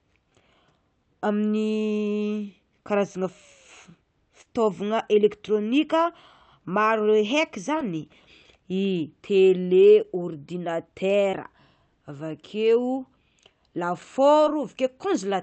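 Speech with short concealed packet loss at 4.41–4.48 s, 7.78–7.81 s, 11.31–11.35 s and 14.45–14.49 s. Roughly 40 ms, then 20 ms gaps of audio arrived too late. The decoder extrapolated the preceding sound across each gap, leaving brief smears or wobbles.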